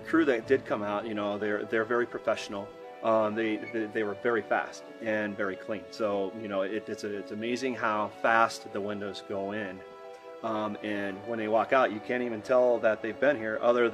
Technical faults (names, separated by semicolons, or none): none